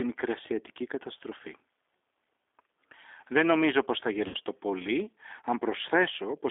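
Throughout the speech, the G.729 codec damage is plainly audible. The band is confined to roughly 300 Hz to 3.6 kHz, and the voice has a rough, slightly synthetic texture from pulse-based excitation rebuilding. This fits an 8 kbit/s G.729A-type link.

From 4.28 to 4.36 s, just after "νομίζω πως θα", there is VoIP packet loss concealed by the speech codec. The decoder bridges a gap of about 60 ms, consistent with six lost 10 ms frames, by extending the last pitch and filter at decaying gain. This produces a brief stretched, fading sound, and the voice stays weak or distorted for a while as the decoder recovers.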